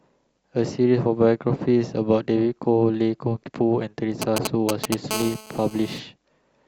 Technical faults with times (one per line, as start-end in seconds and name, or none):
4.22-4.94 GSM signalling bursts
5.11-5.99 GSM phone buzz